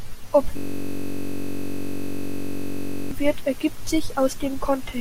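From 0.57 s to 3.11 s, a system hang loop replays one 21.33 ms slice of speech, fitting a 1024-sample buffer, about 120 times. It sounds like a steady 46.9 Hz buzz. The waveform shows identical repeating cycles, and the spectrogram shows flat, evenly spaced harmonic lines until "wird ergibt".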